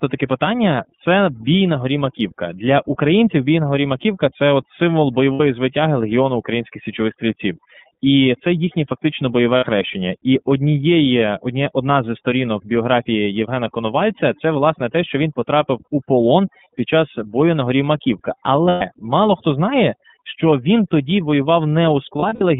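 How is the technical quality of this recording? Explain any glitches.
Technical quality is poor: the speech is processed throughout, and four short dropouts interrupt it.

Overdone noise removal: The background drops and breaks up into twinkling specks. A noise reducer set far too aggressively is switching individual frequency bands down whenever they approach its noise estimate, taking softer parts of the speech with them.

iLBC codec: The voice sits in a narrow telephone band, roughly 150 Hz to 3.6 kHz, with a slightly rough, synthetic edge. That points to the iLBC narrowband VoIP codec, fitting its 13.33 kbps mode with 30 ms frames, coding each frame's excitation independently and discarding everything above 4 kHz.

Lost iLBC frames: At 5.34 s, just after "це от символ", and at 9.57 s, after "це їхнє фактично бойове", about 60 ms of speech turns into a held, slightly buzzy vowel. The same happens for about 120 ms at 18.68 s, just before "мало хто знає". 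From 22.19 to 22.42 s, about 120 ms of gaps are scattered, the longest roughly 70 ms. In each case packets went missing and the decoder repeated the last pitch cycle mixed with noise. Because iLBC frames stand alone, the voice recovers almost immediately afterwards.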